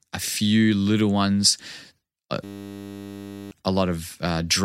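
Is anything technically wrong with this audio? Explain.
Yes. A system hang loop runs from 2.44 to 3.51 s: the system froze while the hardware kept cycling one 10 ms buffer, producing a steady 100 Hz buzz.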